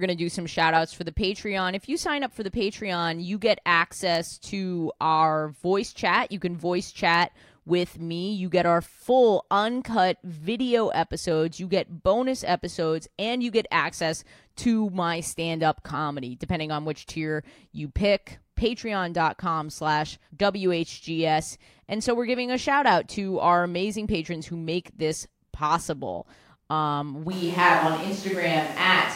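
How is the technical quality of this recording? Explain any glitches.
One fault mars the recording: a sudden change in pickup near the end. From 27.33 s to the end of the clip, the speech abruptly turns roomy and hollow, with thinner bass and room noise roughly 25 dB below the speech, at about the same overall level. This is likely a switch to a distant microphone after the close one dropped out. Unlike a plain low-cut filter or added reverb, the instant jump brings real room noise along with the hollowness.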